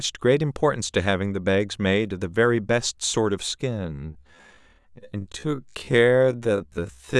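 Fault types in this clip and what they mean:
Time-stretched section: from about 3.67 s right through to the end, the speech suddenly drops to roughly half speed (0.51x) while its pitch holds steady, so it drags, most likely from software stretching the audio by repeating short pieces.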